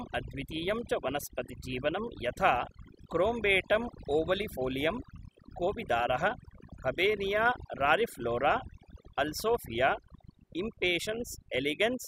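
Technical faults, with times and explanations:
Throughout, overdone noise removal: the noise reduction on this speech is set too hard, so frequency bands sitting near the estimated noise floor are pulled far down or cut entirely. Quieter parts of the voice vanish with them, leaving a lowered background that breaks up into twinkling, warbling specks.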